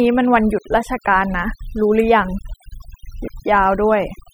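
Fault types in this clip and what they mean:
overdone noise removal: A noise reducer set far too aggressively runs through the whole speech clip, cutting individual frequency bands whenever they sit near its noise estimate. Pauses drop to near silence with twinkling specks, and quiet parts of the speech are cut away with them. Plain gating would mute everything together instead.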